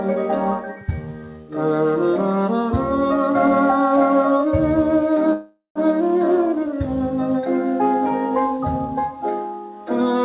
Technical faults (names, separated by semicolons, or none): call audio freeze